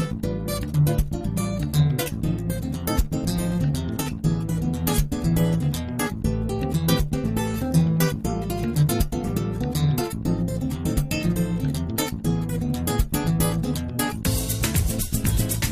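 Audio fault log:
No faults detected anywhere in this recording.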